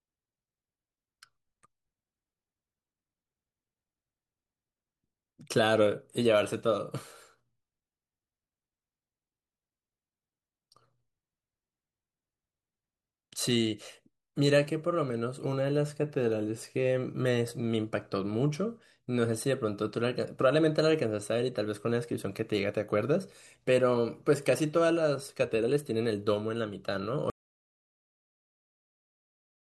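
At 27.3 s the speech cuts to an audio dropout to silence, dead silence with no room tone, through the end, likely a lost input.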